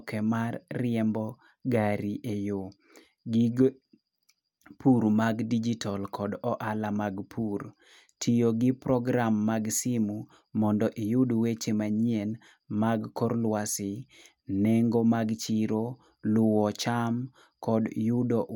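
Speech, with nothing technically wrong to point to.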